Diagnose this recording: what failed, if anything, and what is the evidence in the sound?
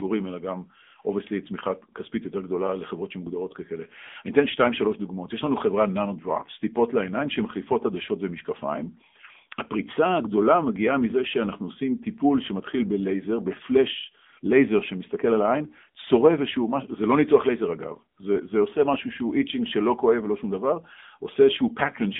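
AMR narrowband mobile codec damage throughout, at the codec stage. The speech is confined to roughly 200 Hz to 3.6 kHz, nothing above 3.8 kHz, and sounds plainly buzzy and synthetic, which fits a low mode near 8 kbps. Few excitation pulses per subframe leave the vocal-tract model starved of detail.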